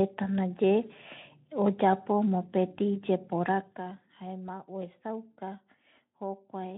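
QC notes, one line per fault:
Nothing to flag here, no faults turned up anywhere in this speech clip.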